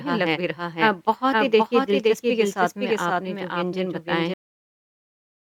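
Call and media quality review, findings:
Doubled audio track, whole clip: full-band second copy of the speech trailing about half a second behind, around 5 dB quieter, no decay or room colour. Likely a second capture path or misaligned edit mixing the same signal in twice.

Cut-off end at 4.34 s: speech stops mid-sound, straight to digital silence with no decay. Final buffers never written or played, so the remaining tail is missing.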